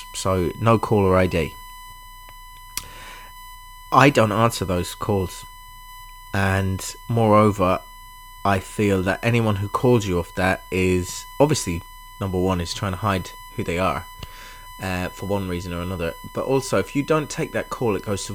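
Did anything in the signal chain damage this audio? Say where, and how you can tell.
Yes. A USB whine sits under the speech for the whole clip, a steady 1 kHz tone roughly 20 dB below the speech. It enters through the analogue wiring: the bus's 1 ms frame rhythm leaks in via power or ground. Mains hum would instead sit at 50 or 60 Hz.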